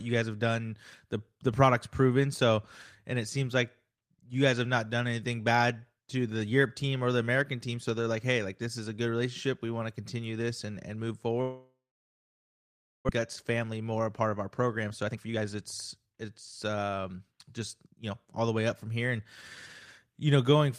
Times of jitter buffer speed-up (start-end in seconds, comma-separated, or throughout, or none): 13.18-15.55, 15.98-18.41